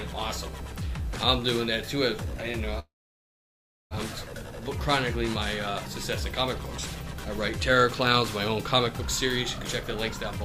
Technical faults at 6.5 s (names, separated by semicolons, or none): none